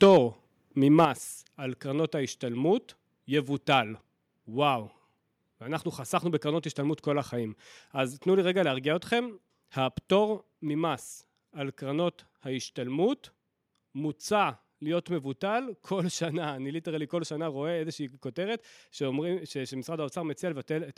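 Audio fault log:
0.02–0.17 s, microphone overload: The opening peaks have a harsh, crackly edge, likely from the input gain being set about 4 dB too high, so the converter flattens their tops. About a tenth of samples here sit at the limit. On the waveform the peaks are sliced flat at the converter's limit. On a spectrogram, broadband smearing and extra harmonics appear above the normal speech energy.
0.04 s, microphone volume stepped down: During the overload, voice and background both drop by about 3 dB at once. This is likely the call software reacting to the overload by lowering the device's input volume in one step. On the waveform the envelope steps down cleanly. On a spectrogram every band dims together at one vertical line.
0.98–1.05 s, microphone overload: A shorter, milder crackle returns on a loud syllable. The signal is about 2 dB over the limit, likely because the input gain is still too hot after the first cut. 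Only a small fraction of samples are clipped, so the waveform shows a few squared-off crests rather than a long plateau. The spectrogram shows brief, thin high-frequency spatter.
1.05 s, microphone volume stepped down: Immediately after that peak the whole signal falls by about 6 dB, a larger drop than the first. This is likely a second automatic reduction of the input volume. The waveform amplitude halves abruptly, and the spectrogram darkens evenly across all frequencies from that instant on.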